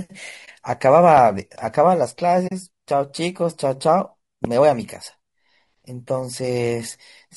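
Low-delay AAC compression runs through the whole speech clip: the voice sounds rough and grainy, with noise between harmonics and a synthetic top band, likely AAC-ELD at around 32 kbps starving its short frames.

AAC frame loss with muting opens a brief dip from 0.45 to 0.48 s, lasting 20 ms, which fits one lost frame whose spectrum the decoder zeroed, fading out and back in.

A loud pop lands from 1.17 to 1.20 s, a sharp transient well above the speech, likely a voltage step or pulse added to the signal while the speech continues underneath.

AAC frame loss with muting recurs from 2.47 to 2.52 s, a 40 ms gap consistent with two consecutive zeroed frames, again faded out and in.

A second loud pop, of similar strength, strikes from 4.45 to 4.47 s.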